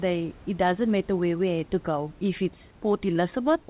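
Speech over a narrowband call path with nothing above 4 kHz, consistent with G.711 A-law at 64 kbps, room noise about 30 dB under the speech, and no technical faults to report.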